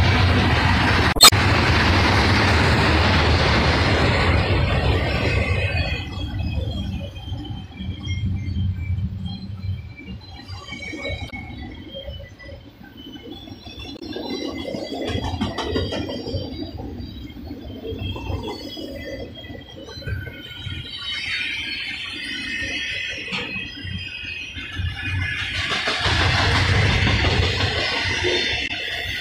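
Damaged data in a compressed stream breaks up the audio four times: from 1.11 to 1.33 s, then in short bursts of about 70 ms at 11.27 to 11.33 s, 13.96 to 14.02 s and 28.64 to 28.71 s. Each is a brief chirp, squawk, click or short hole where corrupted bytes in the compressed file make the decoder misread or discard frames, lose sync and hunt for the next valid frame header before sound resumes.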